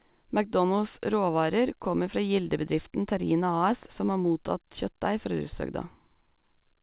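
No technical faults are audible.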